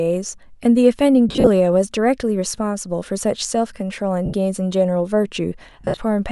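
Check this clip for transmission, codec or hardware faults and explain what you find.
Lost LE Audio frames occur at 1.29–1.48 s, 4.25–4.33 s and 5.81–5.97 s. The decoder conceals each gap by reusing the last spectrum with random signs, smearing the speech into a noisy blur. The first and last are scattered short dropouts, the middle one a single 80 ms gap.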